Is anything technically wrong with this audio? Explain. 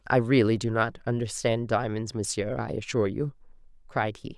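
No, nothing technically wrong can be heard here.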